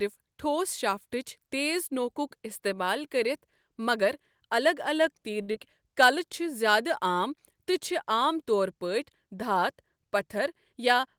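At 5.41 to 5.50 s a sound in the speech hangs on too long, with a faint buzzy sustain. This is a short stall from a late packet: the jitter buffer ran dry, so the receiver stretched the last sound for 65 ms until the packet arrived. Nothing was skipped, but the delay grew by 65 ms.

Right after, at 5.52 to 5.56 s, there is a brief smear. This is short concealed packet loss: 40 ms of audio never reached the decoder, and the receiver patched 23 ms by extending the preceding sound before blending back, trimming the delay a little.

From 10.73 s to the end at 11.18 s the speech sounds hurried while the pitch stays put. This is a jitter buffer speed-up: with too much audio queued, the receiver cut short pitch-period pieces repeatedly, running at 110% speed and removing about 50 ms.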